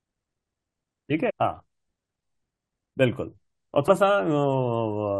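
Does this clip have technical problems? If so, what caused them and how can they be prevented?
Yes. At 1.29 to 1.31 s the speech lurches forward, and again at 3.87 s a shorter jump does the same. This is compressed frames skipped: whole coded frames of about 21.3 ms never reached the output, roughly fifteen frames (around 300 ms) the first time and about four (around 100 ms) the second, so the audio jumps ahead by that much. Verifying file integrity and transferring or storing the encoded stream over a reliable, checksummed path prevents it.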